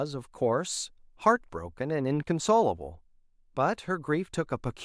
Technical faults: none

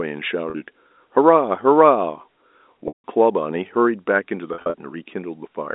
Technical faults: packet loss with pitch repetition

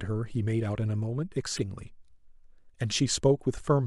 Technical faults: damaged data in a compressed stream

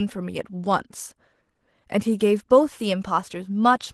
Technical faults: Opus voice compression

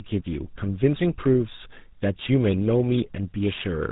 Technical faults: tandem speech coding

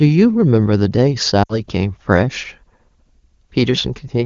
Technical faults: lost AMR speech frames

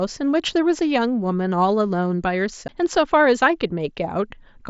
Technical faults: CD skip

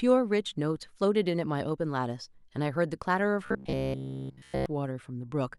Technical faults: robotic sound from repeated short buffers

